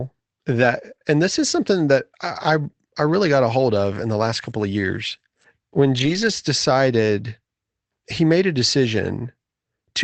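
It's a speech recording passed through an Opus call path, with a lost packet rebuilt from error correction twice: about 40 ms at 0.59 to 0.65 s, just before "and this is something," and a longer 180 ms stretch at 5.97 to 6.31 s. There's no gap either time; the lost audio was replaced from lower-bitrate backup copies, so those bits sound rougher and noisier.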